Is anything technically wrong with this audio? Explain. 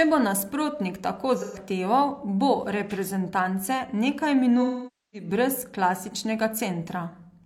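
Yes, there's AAC frame loss with concealment in two spots. Right after "bo nasprotnik tako", from 1.36 to 1.58 s, about 128 ms of audio is missing. Then after "bo reprezentance nekaj", from 4.62 to 5.28 s, about 512 ms is gone. In both gaps the decoder had no real data, so it padded the hole by reusing the last good spectrum. The short gap comes out as a smeared, phasey blur. The longer one drifts toward silence before the sound fades back in.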